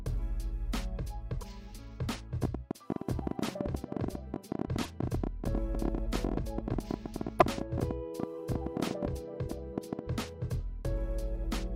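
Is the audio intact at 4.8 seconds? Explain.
No. At 4.8 seconds two faults overlap.

A train of clicks runs from 2.44 to 10.0 s. About 12 sharp clicks a second arrive at an uneven pace, roughly a hundred in all. They peak around 15 dB above the sound and tick through pauses as well. They are likely interference from nearby equipment or a faulty connection or power supply, injecting similar pulses over and over.

Damaged data in a compressed stream hits from 4.83 to 4.86 s. Part of the coded stream is corrupt. The decoder cannot parse those frames, loses sync and searches for the next valid header. For about 30 ms you hear a brief chirp, squawk, click or short hole.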